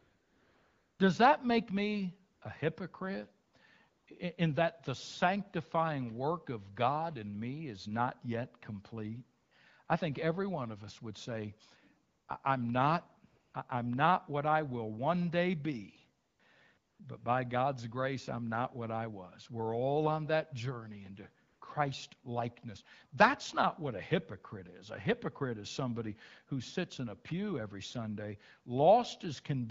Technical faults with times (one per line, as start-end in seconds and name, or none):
0.00-0.99 AMR comfort noise
2.33-2.41 AMR comfort noise
3.47-3.53 AMR comfort noise
3.89-4.07 AMR comfort noise
9.41-9.51 AMR comfort noise
9.85 AMR comfort noise
12.07-12.27 AMR comfort noise
13.29-13.53 AMR comfort noise
16.23-16.39 AMR comfort noise
16.77-16.99 AMR comfort noise
21.47-21.61 AMR comfort noise